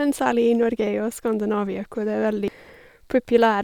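At about 2.48 s there's a tiny glitch, just a few milliseconds long, and it's damaged data in a compressed stream. A small stretch of the encoded speech got corrupted, so the decoder couldn't make sense of those bytes, lost its footing in the stream and had to hunt for the next valid frame before carrying on. What you hear is a quick break dropped into the speech.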